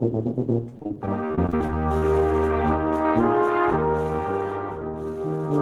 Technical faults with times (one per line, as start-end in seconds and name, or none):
0.69-2.03 repeated packet loss (robotic sound)